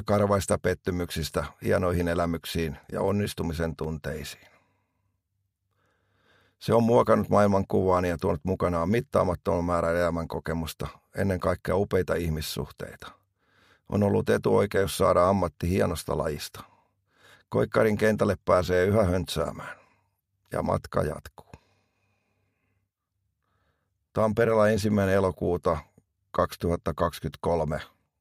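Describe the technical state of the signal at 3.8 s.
At 3.84 s there is a block of digital silence about 5 ms long, where a run of samples has been replaced by silence, the kind of gap left when an output buffer is not filled in time. The sound drops to nothing and returns with no fade, so it is heard as a tick or dip. On the waveform it is a near-flat line; a spectrogram shows a thin vertical broadband streak at each hard edge.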